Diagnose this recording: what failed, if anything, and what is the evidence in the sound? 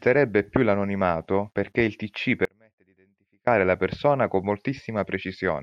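An audio dropout to a faint residue runs from 2.45 to 3.47 s, roughly one second, cut off abruptly and returning mid-flow at "la persona con". The gap keeps only a faint leak, well down at about -35 dB, so the downstream path stayed live, likely an intermittent analogue connection ahead of the converter.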